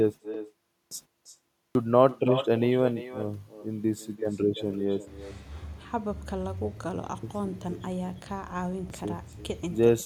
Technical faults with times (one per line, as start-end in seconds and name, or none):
0.00-10.05 echo with no canceller
0.72-0.91 clipped start after a pause
1.55-1.75 clipped start after a pause
8.73-8.90 clipped start after a pause